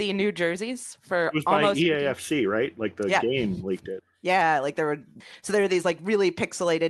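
Around 5.01 s a lost packet was rebuilt from error correction: the decoder played a low-bitrate copy for 20 ms, so there's no gap, just a rougher, noisier patch. At 5.13 to 5.17 s there's a short concealed packet loss, where about 20 ms never arrived and the receiver stretched the last sound over it, giving a quick smear or wobble. More of those rebuilt 20 ms stretches follow at 5.33, 5.61, 5.71 and 5.81 s, each a brief grainy roughening.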